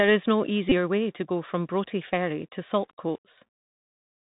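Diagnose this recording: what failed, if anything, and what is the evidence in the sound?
The codec stage is at fault throughout: the Bluetooth CVSD headset codec caps the band at 4 kHz. Its adaptive one-bit steps lag on loud high sounds, leaving scratchy s sounds and granular hiss, which fits a 64 kbit/s CVSD link. A plain band-limit would be clean rather than grainy.

At 0.69 to 0.73 s, a Bluetooth headset packet was repeated: the radio link dropped about 22.5 ms and the chip replayed the previous packet's bits, which fits six 3.75 ms packets. The result is a brief buzz near 267 Hz, periodic rather than the single click of a buffer glitch.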